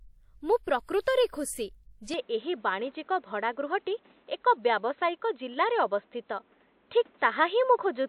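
A short speech recording that goes dull at 2.14 s and stays that way to the end, with no gap at the switch: nothing above about 4.1 kHz, a level shift of around 5 dB, and a new noise floor roughly 35 dB down. Most likely the input switched to a poorer device.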